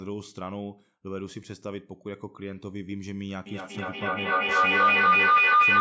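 From 3.46 s to the end, a feedback howl builds: the loop between a microphone and loudspeaker sharing the room gains level each pass, narrowing to a tone around 1 kHz that climbs to about 16 dB above the speech, with repeats coming round roughly every fifth of a second. Unlike an echo, its repeats grow rather than fade.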